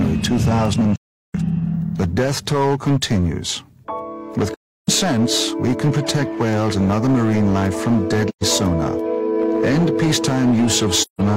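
Throughout, a stage is driven about 9 dB past its limit, causing hard clipping: around a tenth of the samples are cut flat, giving harsh fuzz on loud passages. AAC frame loss with muting follows: the decoder zeroes missing frames, leaving soft-edged holes at 0.96–1.35 s (384 ms), 4.54–4.89 s (341 ms), 8.28–8.43 s (128 ms) and 11.02–11.21 s (171 ms).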